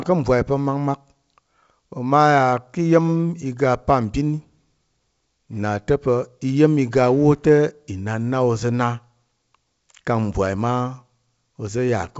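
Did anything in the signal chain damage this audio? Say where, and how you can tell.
No, nothing in the chain has hurt this speech: it's just the G.722 wideband telephone coding at 64 kbit/s doing its normal job, with the sound clear up to about 7 kHz and only the faint upper-band hiss that coder always leaves.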